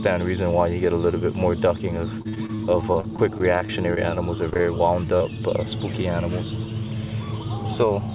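From 2.22 to 4.63 s the sound turns choppy and robotic: repeated packet loss, with gaps up to 41 ms patched by extending the previous sound before the next dropout arrives.

At 5.17 to 5.22 s a brief smear marks short concealed packet loss: about 20 ms never arrived in time and was filled by continuing the preceding audio.

From 7.58 to 8.00 s the audio sounds hurried at unchanged pitch. This is a jitter buffer speed-up running at 110%, trimming roughly 50 ms of pitch-period slices to reduce delay.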